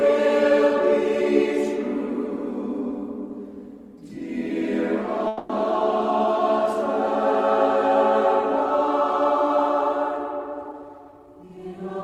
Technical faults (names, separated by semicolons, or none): call audio freeze; jitter buffer speed-up